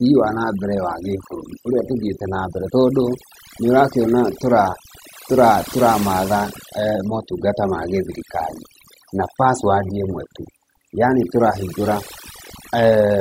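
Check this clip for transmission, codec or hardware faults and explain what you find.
One fault runs throughout the speech: overdone noise removal. A too-aggressive noise reducer gates individual frequency bands near its noise estimate, leaving near-silent pauses with twinkling specks. Unlike codec artefacts, the damage follows the background level rather than the bitrate.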